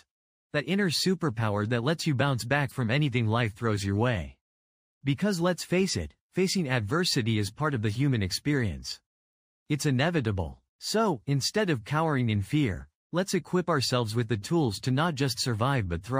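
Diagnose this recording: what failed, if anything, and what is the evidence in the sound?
Codec stage: corrupt frame decoded at 2.68–2.72 s and 14.42 s. Brief glitches peaking around -35 and -40 dBFS appear as isolated spectrogram smears, fitting a couple of bit-damaged frames each.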